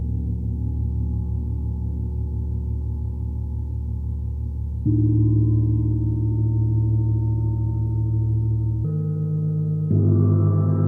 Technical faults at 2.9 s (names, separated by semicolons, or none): none